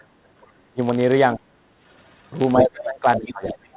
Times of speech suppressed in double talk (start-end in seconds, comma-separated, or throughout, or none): 0.35-0.80, 1.35-1.45, 2.55-3.76